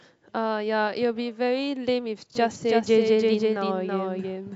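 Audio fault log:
2.35 s to end, doubled audio track: a second, slower capture path or an out-of-step edit has likely mixed the speech in twice. A full-band copy about 5 dB quieter trails roughly 300 ms behind, with no decay or room colour, and cuts in abruptly.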